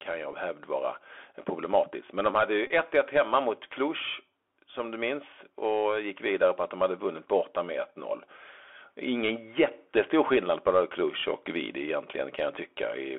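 Bluetooth CVSD headset codec damage runs through the whole speech clip. The band is squeezed to roughly 250 Hz–3.4 kHz, and the sound has the coarse, granular hiss of one-bit delta coding, which fits a 64 kbit/s CVSD stream. Each bit only nudges the waveform up or down, so loud bright sounds outrun the adapting step size and tear, and sibilants come out scratchy rather than crisp.

Bluetooth headset packet repeated faults appear at 0.32 s and from 2.67 to 2.71 s. When a voice packet was lost, the decoder replayed the previous packet's bits. At 0.32 s this is a single tiny tick lasting about 3.8 ms. At 2.67 s the replay repeats every 3.75 ms for about 26 ms, which suggests around seven lost packets. That produces a short, steady buzz near 267 Hz until clean packets resume.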